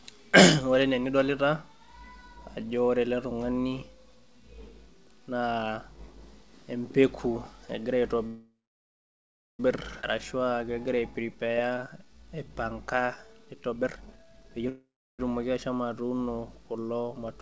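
From 8.27 to 9.6 s, just after "empeku egira", a call audio freeze occurs: packets were likely held up and the jitter buffer ran empty. The last sound is stretched into a fading buzz that drops to about 1.1 s of silence, then the speech carries on from where it stopped, with nothing missing.

At 10.01 to 10.04 s there is a skip ahead. Roughly a second of audio was dropped, so the speech jumps forward with almost no gap and a chunk of it is gone.

From 10.32 to 13.70 s, jitter buffer slow-down sets in. With its reserve running low, the buffer repeated short pitch-period pieces, adding 394 ms in total. The speech plays at 89% speed at unchanged pitch, so sounds are drawn out, sometimes with a slight warble.

From 13.70 to 14.66 s comes the opposite, a jitter buffer speed-up. Holding too much audio, the buffer trimmed out short pitch-period slices, roughly half a second overall. The speech rushes along at 151% speed without any pitch change.

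From 14.69 to 15.20 s there is a second call audio freeze, this time before "etumoki ashomo atuuno kulo", as delivery likely stalled again. The last sound fades into about 0.35 s of silence, then the speech resumes intact.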